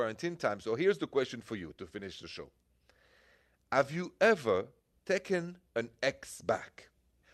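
No technical faults can be heard anywhere in the speech recording, with the signal staying continuous and intact throughout.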